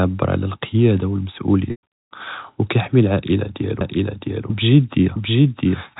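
At 1.71 s, packet loss with pitch repetition cuts into the stream. Around 120 ms of audio never arrives, which fits four lost packets, and the receiver covers the hole by looping the last pitch period of the speech and fading it out over about 50 ms. The sound briefly holds on a buzzy, frozen tone, then sinks into silence before the speech cross-fades back in at 1.82 s, still within the 4 kHz telephone band of G.711 coding.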